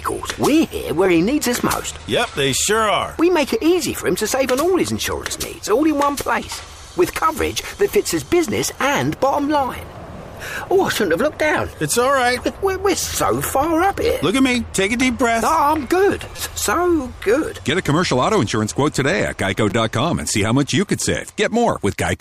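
A repeated buffer occurs at 1.06, 3.19, 5.68, 16.36 to 16.39, and 19.70 s. New audio arrived late, so the last 5.8 ms piece replayed. That fits a 256-sample buffer. Each repeat sounds like a brief click or buzz, longest at 16.36 s.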